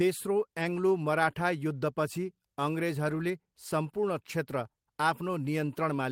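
Brief rough, noisy patches without any gap at 0.59 to 0.61 s and 3.07 to 3.21 s: lost packets rebuilt from error correction, the decoder playing low-bitrate copies carried by the following packets.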